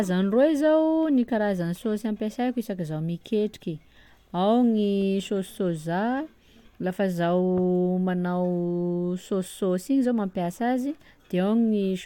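No technical faults are audible anywhere in the speech recording.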